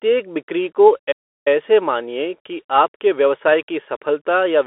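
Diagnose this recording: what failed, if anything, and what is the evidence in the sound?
Bluetooth CVSD headset codec, throughout: a codec-stage fault. Nothing sounds above about 3.8 kHz, the band sits roughly within 300 Hz to 3.4 kHz, and the damage is plainly audible, which fits a 64 kbps CVSD link whose one-bit, adaptive-step delta coding cannot track fast waveform changes.

Playback stall, 1.11 to 1.48 s: the speech cuts to silence for about 0.34 s mid-flow, then resumes at "मानिए की आपके व्यवसाय". This is likely a playback-stage buffer underrun or a blocked output thread, leaving the device with nothing to play until data arrived again.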